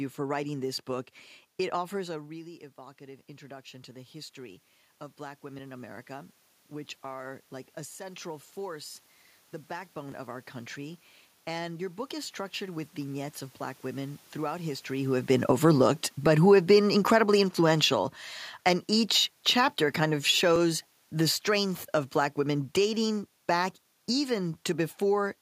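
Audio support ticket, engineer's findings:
Automatic gain rising, 2.06–4.42 s and 5.17–9.04 s. Input level drops about 16 dB as the talker moves back near 2 s. AGC compensates slowly, adding about 6 dB then about 5 dB. Voice and room noise swell together.

Dropped buffer (overrun), jumps at 10.12 s (just before "of our country"), 18.3 s and 20.56 s. Each is a roughly 10 ms skip with no gap, sound jumping straight ahead. Likely capture thread failing to drain the hardware buffer in time.

Automatic gain falling, 15.29–17.99 s (after "throughout history who have") and 18.67–24.39 s. Level rises as the talker comes closer near 15 s. AGC pulls gain down about 5 dB each time, and voice and background sink together.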